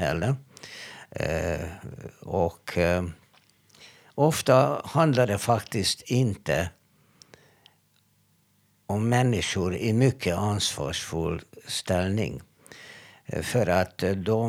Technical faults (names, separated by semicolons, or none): none